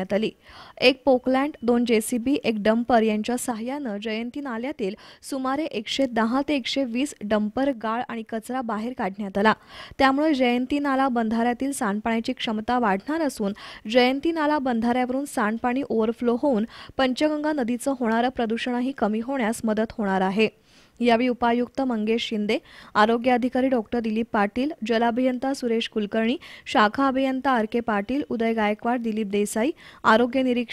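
From 3.52 to 5.92 s and again from 7.73 to 9.34 s, the sound abruptly drops by about 6 dB and then jumps back. This is likely one channel dropping out: with only one stereo side left, the mono sum loses half its shared content.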